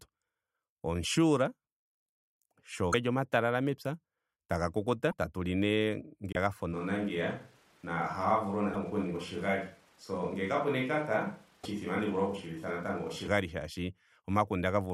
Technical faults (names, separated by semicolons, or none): broken MP3 bit reservoir; switch to a distant microphone